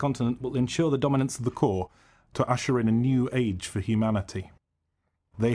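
From 1.40 s to the end, the speech plays at the wrong sample rate: samples are clocked out slower than they were captured, with no conversion. Speed drops to 0.919 times and pitch falls about 1.5 semitones, consistent with 24 kHz audio played at 22 kHz, so the voice sounds lower and slightly sluggish.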